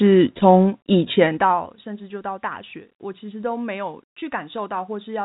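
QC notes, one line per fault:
1.05–1.73 s, zipper noise: the gain drops by about 20 dB in unsmoothed increments, roughly 200 a second, instead of a continuous ramp. Each jump puts a tiny click into the waveform, and the fast run of clicks rides on the speech as a buzzing zip while the level falls.
4.20–4.22 s, packet loss with pitch repetition: about 20 ms of audio failed to arrive, which fits two lost packets. The receiver bridged the gap by repeating the last pitch period, so the speech briefly sounds held and buzzy before normal audio resumes.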